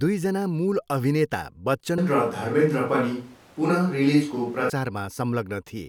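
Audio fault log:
1.98 to 4.70 s, switch to a distant microphone: the speech suddenly goes roomy and hollow, with thinner bass and background noise roughly 30 dB under it, though the level barely changes. Likely the close mic dropped out and a farther one took over, then it snaps back.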